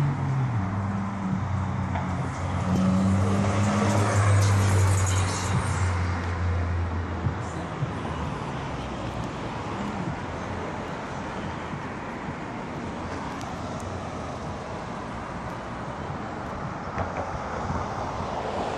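At 10.88 s there's a single bit error spike, a short sharp tick that sits apart from everything around it. What's happened is that one bit got flipped somewhere in memory or on a digital link, so across three consecutive samples the value leapt by a power of two and then dropped straight back. It peaks at about -33 dBFS, and being so brief it smears across the whole spectrum rather than following anything in the sound itself.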